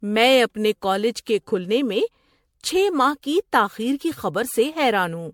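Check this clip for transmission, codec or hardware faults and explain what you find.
One codec fault runs through the whole speech recording: generation loss. Across the full duration the sound is swirly and hollow, with smeared consonant attacks and no content above 19.8 kHz. The likely cause is repeated MP3 decoding and re-encoding, around ten passes, at a rate consistent with 96 kbit/s. Each pass quantises again on a shifted frame grid, so noise and spectral holes compound. The result sounds worse than a single encode at that rate would.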